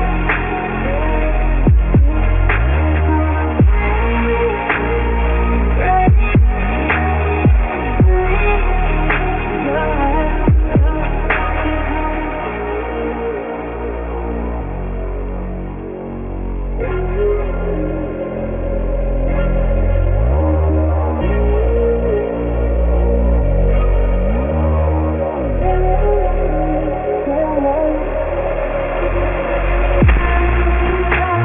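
Aliasing runs through the whole clip. The rate was lowered, which fits a drop to 6 kHz, without an anti-alias filter, so content above 3 kHz folds back as gritty, metallic tones fairly strongly, around 15 dB below the main sound. A spectrogram shows energy packed hard against a 3 kHz ceiling, with mirrored, unrelated streaks.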